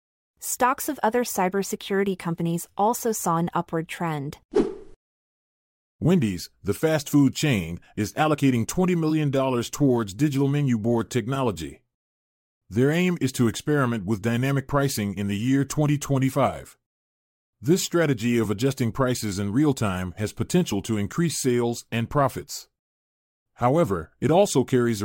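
No technical faults can be heard anywhere in the recording; the signal holds steady throughout, with nothing in the playback chain drawing attention to itself.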